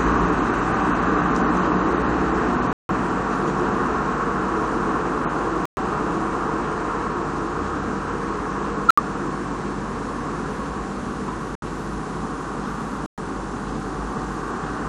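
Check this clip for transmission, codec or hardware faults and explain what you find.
Five abrupt silent gaps break up this everyday-sound recording: corrupt frame muted, at 2.73–2.91 s, 5.65–5.78 s, 8.87–9.00 s, 11.55–11.63 s and 13.06–13.19 s. Damaged compressed frames were rejected by the decoder and replaced with digital silence, giving holes of roughly 0.08 to 0.18 s, each spanning several frame lengths. Unlike a skip, nothing afterwards arrives early. Unlike concealed packet loss, the gaps are true silence rather than smeared or repeated fill.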